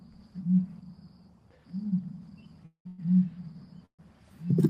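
Call audio freezes occur at 2.65 to 2.87 s, 2.87 to 3.00 s and 3.85 to 4.01 s. Each stretches the last sound into a fading buzz, dropping to silence for about 100 ms in the first and 90 ms in the third. The audio then resumes with nothing lost, likely because delayed packets drained the jitter buffer.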